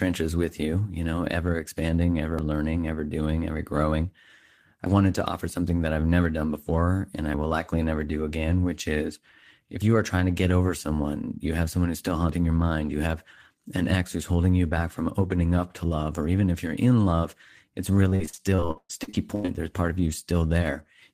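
Around 2.39 s, just after "you know ever expanding", there's a tiny skip, and it comes back at 4.86 s (right before "wanted to offer something"), 7.34 s, 9.82 s and 12.29 s, just after "have someone who's still". That's audio missing between chunks: about 20 ms vanishes each time and the two sides butt straight together, so the speech hiccups. The steady spacing of roughly 2.5 s points to the likely cause, a recorder handling audio in fixed blocks and dropping a sliver at each handover.

From 18.09 to 19.50 s it turns into repeated packet loss, with that choppy, robotic sound. Over that 1.4 s stretch the stream keeps losing bits, and each hole gets papered over by stretching the last bit of sound. About a third of the span is patched this way, with the longest hole around 117 ms, so it comes across as a run of stuttery fragments with chunks dropped out.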